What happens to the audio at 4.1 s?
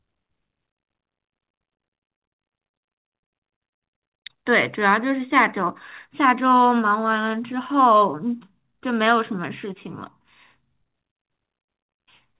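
Nothing goes wrong at 4.1 s: the speech passes through the call path intact, with the usual narrowband character of G.711 mu-law coding and nothing above 4 kHz.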